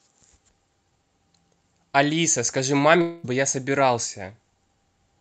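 From 3.01 to 3.26 s the speech gives way to a fading buzz for about a quarter second, likely a long network dropout papered over by concealment.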